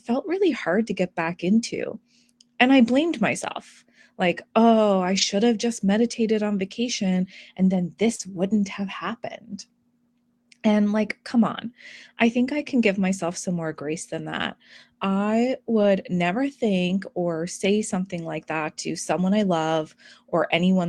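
At 5.17 to 5.23 s, between "myself like oh i" and "have just meditated on", the audio turns briefly rough and noisy for about 40 ms. This is a lost packet rebuilt from error correction, consistent with two separate packets replaced by the low-bitrate copies carried in the following packets.

From 8.15 to 8.21 s comes a short concealed packet loss. About 40 ms never arrived, and the decoder extrapolated the preceding sound for 36 ms before blending back, heard as a brief smear. The final 20 ms, from 8.19 s, just before "wouldn't have happened", was rebuilt from error correction and sounds coarser.

At 15.83 s, between "grace than that I" and "never think or say", a single 20 ms frame was rebuilt from error correction, producing a short grainy patch with no gap.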